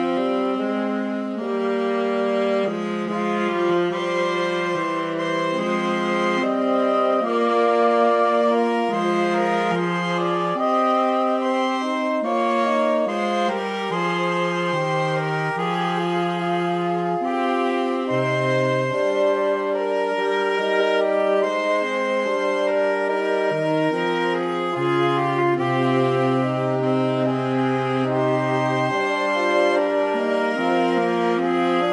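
Nothing technical stands out anywhere in this audio; it all sounds just as it should.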